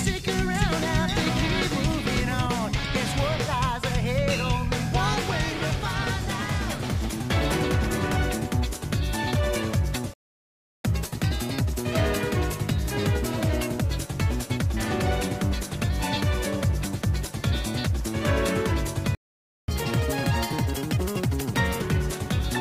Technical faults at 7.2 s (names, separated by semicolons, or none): none